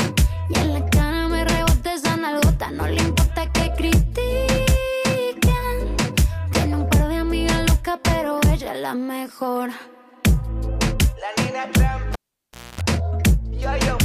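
At 12.13 s the audio breaks with a pop, drops to near silence for about 630 ms, gives a 255 ms burst of 60 Hz mains buzz, then pops back by 12.81 s: a live cable pulled and plugged in, with the buzz heard while only the tip made contact.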